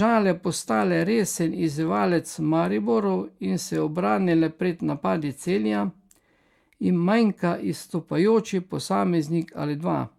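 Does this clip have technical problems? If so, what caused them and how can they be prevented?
No technical problems are audible.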